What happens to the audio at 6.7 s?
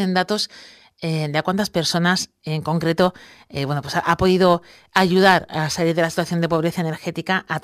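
At 6.7 s the speech is inside a stretch of crude rate conversion running from 2.6 s to 6.93 s. The sample rate was changed without a proper filter, simply picking the nearest existing sample, which fits a jump from 48 kHz to 44.1 kHz. The resulting timing errors repeat in a fixed cycle and create stray inharmonic tones roughly 30 dB below the speech. They come through as a gritty fizz that rides on the louder and brighter parts.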